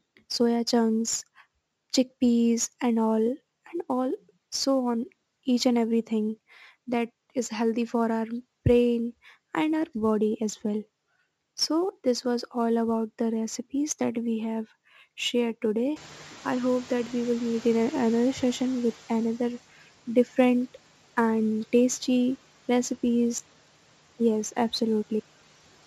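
Sample clock jitter runs through the whole recording. The converter's clock wanders by a few microseconds, so samples land slightly off time, and the error tracks the waveform's slope. It adds a faint roughness, around 30 dB below the speech, strongest on loud and bright passages.

From 15.96 s to 19.59 s the noise suppressor is catching up. The room noise jumps by about 21 dB near 16 s, and the suppressor's noise estimate lags. The noise first passes through with little reduction, then sinks by about 10 dB over roughly 3.6 s as the estimate adapts.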